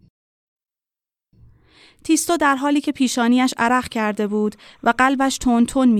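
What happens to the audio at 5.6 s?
A faint, steady chirping warble sits behind the speech at 5.6 s, part of timecode bleed running from 3.68 s to the end. Linear timecode at 29.97 frames per second is leaking in from a neighbouring track or cable, its square wave flipping between tones near 1 and 2 kHz.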